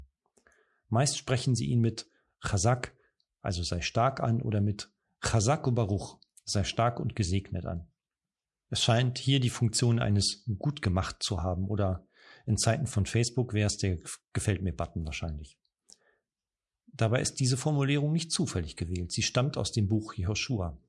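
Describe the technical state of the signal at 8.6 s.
At 8.6 s the signal is intact, with no dropout, distortion, or other fault in the speech at that point.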